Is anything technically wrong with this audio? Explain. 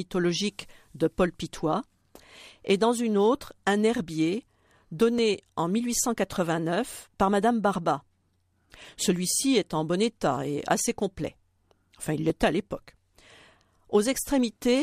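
Yes. Two devices likely running on separate clocks, drifting apart by a couple of hundred parts per million, cause clock drift buffer slips. Every 3.56 s, from 1.63 s to 12.30 s, just before "à l'époque", a few dozen samples drop or repeat, giving about four regular clicks in the speech.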